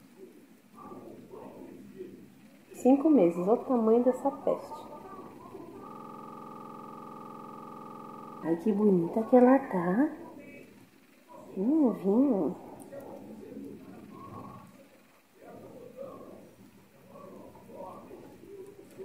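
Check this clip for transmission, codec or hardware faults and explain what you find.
One fault is present: a system hang loop from 5.91 to 8.43 s. The computer or audio driver stalled while the sound hardware kept replaying the same ring buffer, so a single 46.4 ms slice of audio repeats exactly, over and over, at 21.5 times per second, which fits a 2048-sample buffer. For about two and a half seconds the sound freezes into a rapid, mechanical stutter, close to a coarse buzz, before normal audio resumes.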